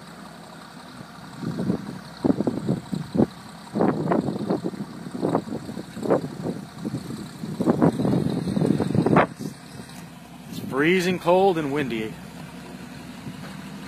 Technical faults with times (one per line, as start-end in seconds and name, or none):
7.90-13.88 adaptive stream at a lower bitrate